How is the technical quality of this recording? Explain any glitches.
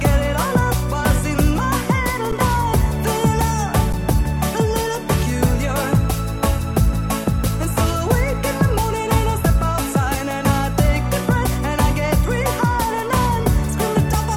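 The recording has two brief dropouts, both an underrun with held sample, at 2.32 s and 3.93 s. Each time the output buffer ran dry for about 10.7 ms, which fits a 512-sample buffer, and the converter held its last value. The sound flattens and stalls briefly, then resumes where it left off with only a soft edge, since no audio was lost.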